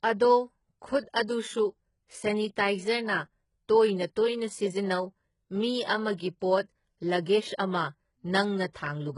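The speech in this clip was most likely squeezed through HE-AAC compression at a very low rate, with the treble rebuilt by copying lower bands upward rather than coded directly. Nothing reaches above 11.1 kHz, and the heavy damage sounds like a bitrate around 12 kbps: s sounds come out gritty and lispy, with a metallic sheen where the faked treble fails to match the harmonics below. Pre-echo occurs where the codec spread its block-wide quantisation noise backward ahead of sharp attacks. Just after "ꯇꯣꯏꯅ ꯇꯣꯏꯅ ꯁꯤꯖꯤꯟꯅꯧ ꯃꯤ", a short hiss smears across 6.17 to 6.20 s, about 29 ms, before the onset. Another spans 8.72 to 8.76 s, about 31 ms, leaving both attacks soft and blurred.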